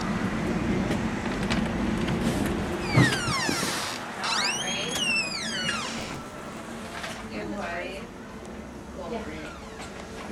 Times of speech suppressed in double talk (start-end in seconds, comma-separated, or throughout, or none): none